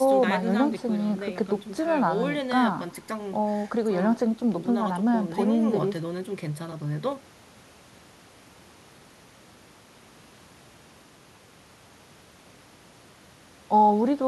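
A speech recording with nothing technically wrong with it.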